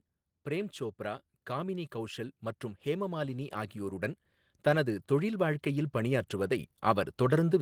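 Automatic gain rising occurs from 0.44 to 4.11 s, lifting level by about 6 dB, then again from 4.63 s to the end; speech and background swell together.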